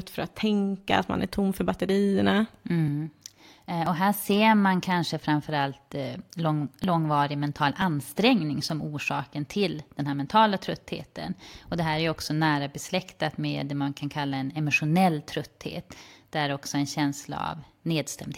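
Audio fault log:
3.87 s and 6.84 s, overlap between stream segments: a tiny skip, the first just before "och här ser man". Overlapping timestamps on adjacent segments, likely about one second long, made the player discard about 19 and 6 milliseconds of real audio, so the waveform jumps.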